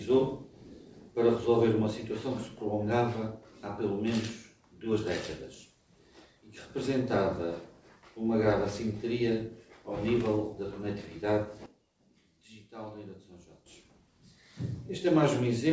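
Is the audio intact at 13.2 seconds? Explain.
No, 13.2 seconds sits inside a sudden gain jump running from 11.66 to 13.66 s. The level drops by about 14 dB in a single step with no fade, and the background noise drops right along with the sound, so it's a stepped change, not a natural quieter passage. The likely cause is a digital gain setting or bit shift applied instantly rather than ramped. It then snaps back up just as abruptly at 13.66 s.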